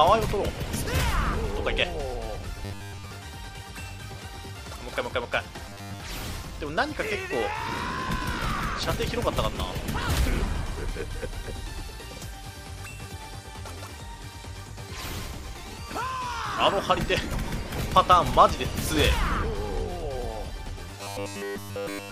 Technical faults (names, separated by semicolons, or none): robotic sound from repeated short buffers